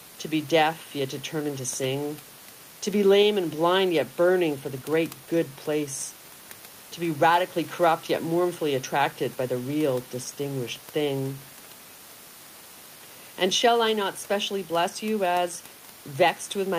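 There are no technical faults to describe, at any point in the speech.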